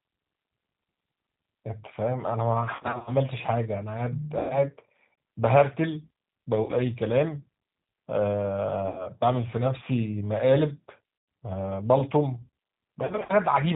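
Throughout the speech, the G.729 codec at 8 kbit/s is plainly audible. Nothing above 4 kHz survives, and voiced sounds have a rough, slightly synthetic grain because each 10 ms frame is rebuilt from a vocal tract filter, a pitch predictor and a handful of pulses. A simple low-pass filter would dull the sound but leave it natural. The buzzy, pulse-built texture instead points to this kind of model-based coding.

VoIP packet loss concealed by the speech codec occurs six times. From 2.75 to 3.11 s, about 200 ms of audio is missing, scattered over roughly a third of a second in runs no longer than 40 ms. The other gaps are at 4.39 to 4.57 s, 6.63 to 6.71 s, 8.88 to 9.08 s, 11.18 to 11.28 s and 13.05 to 13.34 s. The last of these is also scattered, with runs up to 30 ms. At each gap, the decoder repeats its last pitch and filter at falling gain, so the sound smears into a fading buzz rather than dropping to silence as a plain dropout would. 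The sound stays weak and distorted briefly after packets resume.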